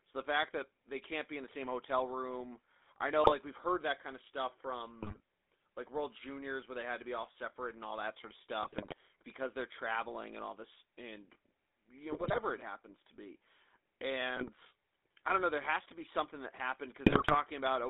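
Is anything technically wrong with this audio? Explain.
Yes. The whole recording has passed through the GSM full-rate codec. The speech sits in a narrow band of about 250 Hz to 3.6 kHz, which fits a 13 kbps GSM full-rate stream. The codec models the vocal tract and rebuilds it from sparse, regularly spaced pulses. That gives the voice a plainly audible buzzy, gravelly roughness.

There are also GSM bit errors at 3.24–3.33 s, 5.02–5.20 s, 8.63–8.94 s, 12.12–12.40 s, 14.35–14.64 s and 17.06–17.35 s. Corrupted bits reached the decoder and spoiled its filter, pitch or gain values for several frames at a time. Each burst breaks the speech into squawks, pops and gargling.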